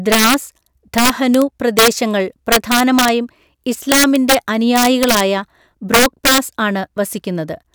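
Integer overflow cracks the loud speech peaks at 0.12–0.34, 0.98–1.42, 1.79–1.88, 2.52–3.09, 3.92–4.35, 4.76–5.20 and 5.94–6.38 s, pushed about 2 to 7 dB past full scale. Samples wrap to the opposite sign, showing as waveform spikes jumping rail to rail and bright full-band streaks on a spectrogram.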